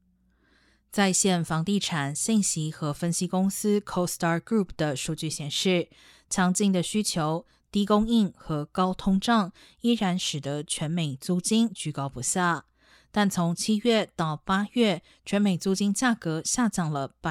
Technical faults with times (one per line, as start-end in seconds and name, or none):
none